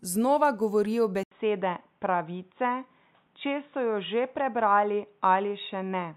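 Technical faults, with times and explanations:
1.23–6.17 s, input switched to a poorer device: right after "znova govorijo" the speech drops out for about 80 ms, then returns dull and boxy, with nothing above 3.8 kHz and a faint new background hiss sitting well below the speech, while loudness stays roughly the same. The likely cause is the recording input changing mid-take to a narrower-band microphone or headset call profile, whose restricted bandwidth and own noise floor replace the original pickup.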